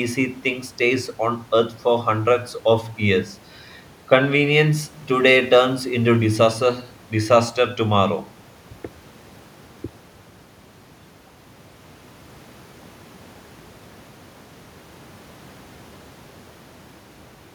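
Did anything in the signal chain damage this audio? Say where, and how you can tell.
No, nothing damaged this audio.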